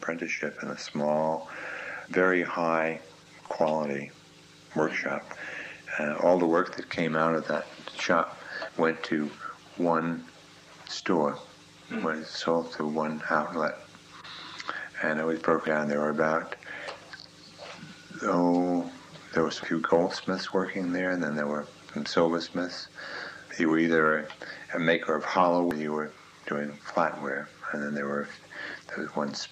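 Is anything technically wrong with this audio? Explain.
Yes. Damaged data in a compressed stream causes brief glitches at 3.48 to 3.51 s, 8.69 s, 15.66 s, 19.63 s and 25.71 s. Corrupted frames make the decoder misread them and resynchronise, producing short chirps, blips or brief holes.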